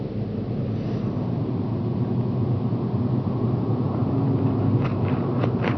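No technical faults can be heard in the audio.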